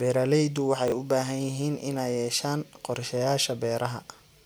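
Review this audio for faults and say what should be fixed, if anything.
At 0.88 to 0.92 s the speech has a brief jumbled moment, caused by chunks out of order. Over that 40 ms span, one 20 ms chunk arrives one slot late and plays after the chunk that should follow it. No audio is missing, but the two blocks are swapped, leaving three hard joins where the waveform jumps. To prevent it, reorder chunks by sequence number in a jitter buffer before playback or writing.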